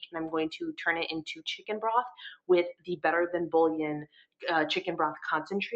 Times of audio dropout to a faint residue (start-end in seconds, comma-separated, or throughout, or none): none